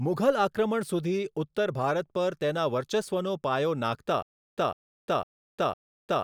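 From 4.22 s to the end, the speech breaks into a stutter with silent gaps: a 152 ms fragment repeats four times, each followed by about 352 ms of digital silence, a steady 504 ms cycle. This likely reflects a stalled stream replaying its last buffer while the intervening audio is lost.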